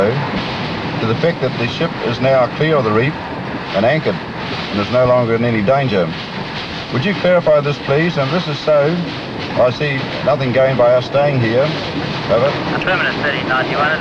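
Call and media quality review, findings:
No dropouts, level jumps, distortion or timing faults can be heard anywhere in the signal, and nothing points to trouble in the capture, transport or playback chain.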